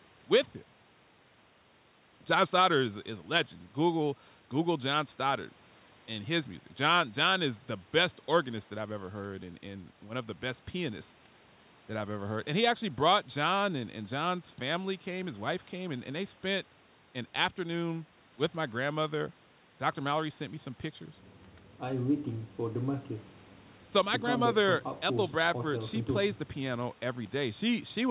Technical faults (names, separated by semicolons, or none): none